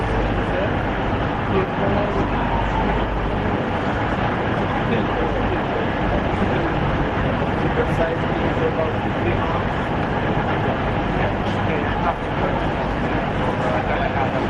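No technical faults can be heard in this recording of sounds, which runs without any disturbance to the signal.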